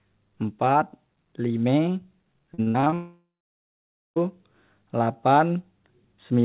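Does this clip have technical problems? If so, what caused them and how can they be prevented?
Yes. Repeated packet loss (robotic sound) runs from 2.54 to 2.94 s: six short gaps, the longest 62 ms, are each patched by extending the previous sound, so about half that stretch is synthetic and choppy. A steadier connection or more jitter-buffer headroom would prevent it.

From 2.94 to 4.18 s about 1.2 s of audio is lost: the last sound is stretched into a fading buzz, then roughly 0.9 s of silence follows before the audio resumes, which points to a likely long network dropout. A more reliable network link, or redundancy such as forward error correction, would prevent it.

The narrowband call path, with nothing above 4 kHz, is consistent with G.711 and is not a fault.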